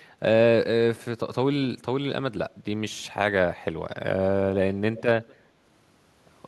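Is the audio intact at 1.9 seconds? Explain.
Yes, the audio at 1.9 seconds is intact, with the speech running through that moment without any audible dropout, click, distortion or other fault.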